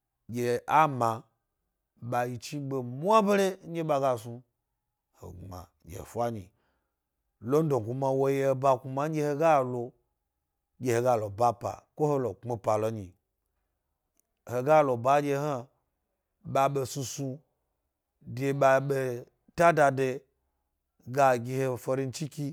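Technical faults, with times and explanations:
No technical faults can be heard in this speech recording; the signal stays continuous throughout.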